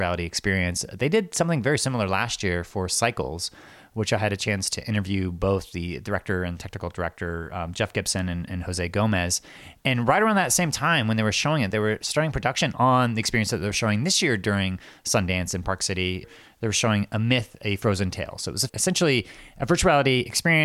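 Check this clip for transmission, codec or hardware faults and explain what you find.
No transmission, codec or hardware faults turn up anywhere in this clip.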